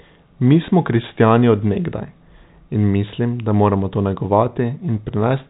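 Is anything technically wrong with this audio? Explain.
No, nothing in this speech clip is technically wrong. It has the sound of G.711 telephone coding, with nothing above 4 kHz and only a faint quantisation noise that rises and falls with the level of the speech.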